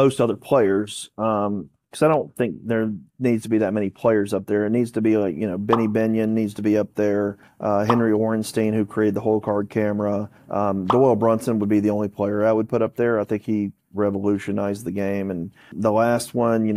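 No technical faults can be heard anywhere in this audio. The sound continues without any interruption or audible disturbance.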